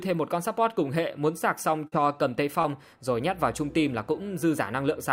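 Short concealed packet loss occurs twice, at 1.87 to 1.94 s, where about 40 ms failed to arrive, and at 2.62 to 2.66 s, where 20 ms went missing. Each time the decoder extended the preceding sound across the gap and then blended back, leaving a brief smeared wobble.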